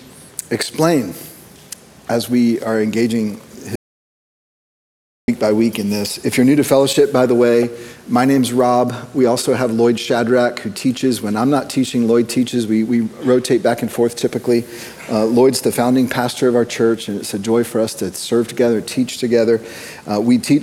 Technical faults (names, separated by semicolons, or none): audio dropout to silence